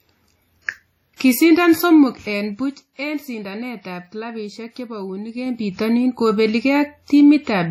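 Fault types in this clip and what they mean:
Low-bitrate audio saved at a high bitrate: Across the whole clip the speech has the smeared, swirly artefacts of a heavily compressed source, and nothing is present above 16.3 kHz. A spectrogram shows a hard, flat ceiling with a ragged, blocky texture beneath it. The likely cause is an earlier low-rate encode, which fits something like 32 kbit/s WMA, later re-saved as a generous MP3 that brings none of the lost detail back.
Zipper noise: From 5.29 to 5.80 s the level shifts by around 10 dB in 2 dB jumps, at about ten a second. Each jump leaves a small click, so a fine ticking rides on the speech while the level moves. On the waveform the envelope forms a staircase rather than a slope. A spectrogram shows thin vertical lines at each step.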